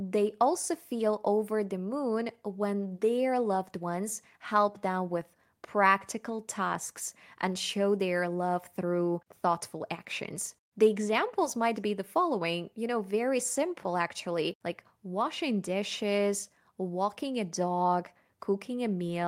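No technical faults can be heard anywhere in the speech.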